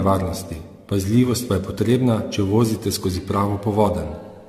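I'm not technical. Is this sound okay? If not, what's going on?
No. Throughout, the speech sounds swirly, hollow and smeared, with the starts of sounds blurred. That is generation loss, likely from being compressed and re-saved around seven times over. A single heavy compression sounds dull, but not this layered, watery smearing.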